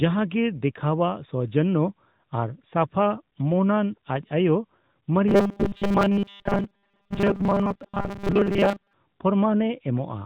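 Throughout, AMR narrowband mobile codec coding discards everything above 4 kHz and models the speech sparsely, which fits a mid-rate mode near 10.2 kbps, leaving it muffled, buzzy and plainly synthetic. From 5.28 to 8.93 s, audio likely arrived too seldom, so the last 5 ms buffer was looped over most of the passage: robotic sound from repeated short buffers, a rigid metallic 200 Hz buzz.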